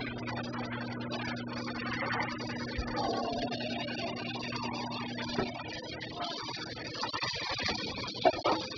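Throughout, heavy AAC compression dulls and smears the sound, likely from AAC-LC at a very low bitrate around 8 kbps; a spectrogram shows nothing above 5 kHz. Periodic clock jitter of around 1 kHz also runs the whole way, adding a rough metallic edge, visible as sidebands flanking each component.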